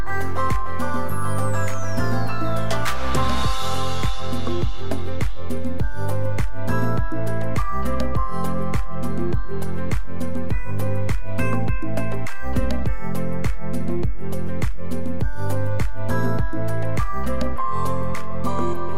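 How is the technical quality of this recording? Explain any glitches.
There is one technical fault, and it runs through the whole recording. It is a DC offset of about -15 dBFS. The entire waveform sits shifted away from zero by a constant amount. You cannot hear it directly. It eats headroom and shows as steady energy at 0 Hz.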